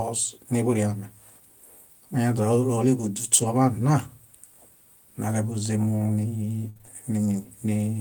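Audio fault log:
2.33–2.39 s, 3.37–3.43 s and 5.51–5.53 s, lost packet rebuilt from error correction: no dropout, just brief rough, noisy patches of about 40, 40 and 20 ms. The missing audio was replayed from a lower-quality backup copy carried in the following packet.
6.69–6.89 s, repeated packet loss (robotic sound): the speech turns choppy here. Four holes, the longest about 60 ms, each get papered over by stretching the previous sound, so roughly 60% of this stretch is filler.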